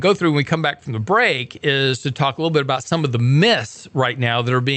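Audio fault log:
No faults heard in this speech clip.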